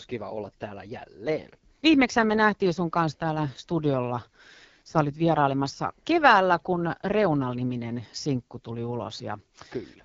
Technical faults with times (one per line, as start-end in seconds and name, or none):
0.00-10.04 AMR wideband (HD Voice) codec